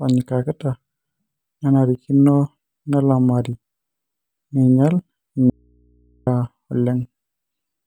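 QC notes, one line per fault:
5.50–6.27 s, audio dropout to a faint residue: right after "neinyal in" the speech cuts out abruptly for about 0.77 s, and the gap holds only mains hum sitting roughly 40 dB below the speech level before the signal snaps back in mid-flow. The hard edges on both sides separate it from a pause or fade. The likely cause is a momentary loss of the source while the downstream input stayed live, leaving only the hum from the open input.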